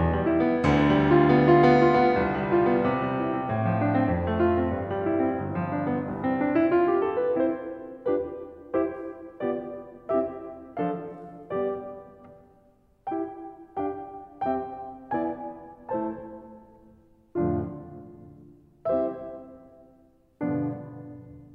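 A short piece of music, and nothing technical stands out as going wrong anywhere in it, so there's no problem here to point to.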